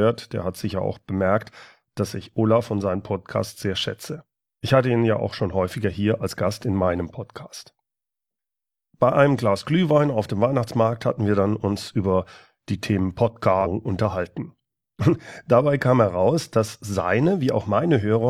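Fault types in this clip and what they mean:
damaged data in a compressed stream: corrupt bytes make the decoder misread frames and lose sync, giving brief blips at 13.61 and 17.70 s.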